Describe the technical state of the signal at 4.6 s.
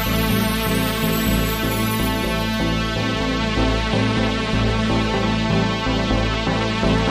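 At 4.61 s there is a single sharp click. It is most likely dropped samples. A fraction of a millisecond goes missing, so the waveform jumps straight to a later value. Nothing audible is lost. The step itself makes the click.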